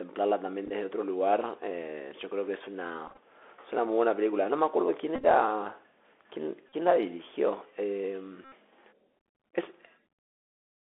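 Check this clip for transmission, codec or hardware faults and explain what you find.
Two faults are audible: the Bluetooth CVSD headset codec throughout the speech, and five bursts of Bluetooth headset packet repeats.

The Bluetooth CVSD headset codec is present for the whole clip. It encodes each sample as a single up-or-down bit at 64 kbps, which confines the sound to roughly 300 Hz to 3.5 kHz. Its adapting step leaves a granular hiss and scratchy sibilants. That grain, not a simple band-limit, marks CVSD.

Bluetooth headset packet repeats occur at 0.66–0.71 s, 3.08–3.18 s, 5.15–5.25 s, 6.69–6.74 s and 8.45–8.52 s. Lost packets were replaced by the previous packet's bits, so a run of repeats every 3.75 ms makes a brief buzz near 267 Hz. The longest run in the burst at 5.15–5.25 s is around 20 ms. A dropout would give silence instead.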